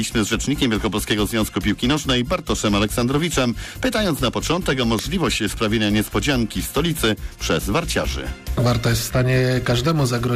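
File header played as audio at 4.99 s: a second piece's header bytes were decoded as samples where the audio was joined, producing a sharp, loud click.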